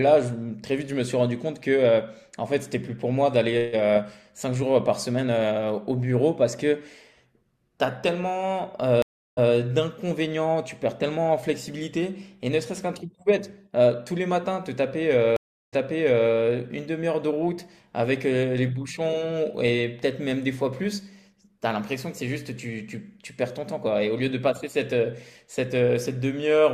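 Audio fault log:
9.02–9.52 s and 15.36–16.32 s, stream reconnect: the connection dropped, leaving silences of 0.35 s and 0.36 s, then a fresh decoder picked up 0.15 s and 0.6 s earlier, so sound repeats. The waveform goes flat, the spectrogram shows a full-band blank gap, then a brief fade-in.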